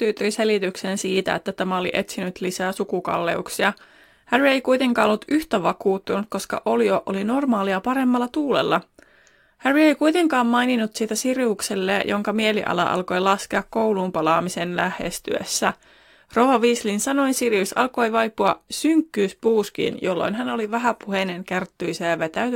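Throughout the speech there is sample clock jitter. The converter's timing wanders by a few microseconds, so each sample lands slightly off its proper instant, and the resulting error scales with how steeply the waveform is changing. The result is a fine hiss or grain riding on the speech, roughly 35 dB below it, thickest on loud passages and sharp sibilants and disappearing in the pauses.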